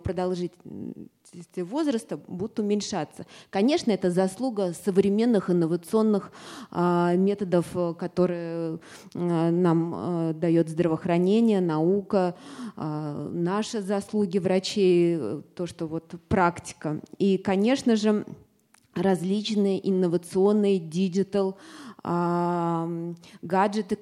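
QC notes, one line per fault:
No technical faults can be heard anywhere in the audio, and the signal holds steady from its opening to its close.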